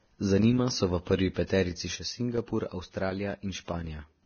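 Speech throughout, with heavy Vorbis compression damage from start to finish. Nothing comes through above 6.5 kHz, and the treble that's left is hissy and grainy, with roughened tones and smeared consonant attacks. That's the codec drawing a smooth spectral floor and quantising the fine detail on top of it so coarsely that the detail turns into noise-like texture. The amount of damage fits a bitrate of around 18 kbps. Then at 1.95 s the level drops abruptly by about 6 dB and stays down until 4.22 s, with the sound's character unchanged. That's what you'd hear if one channel of a stereo pair carrying the same material dropped out, leaving only half the signal in the mono sum. A lost channel is the likely cause.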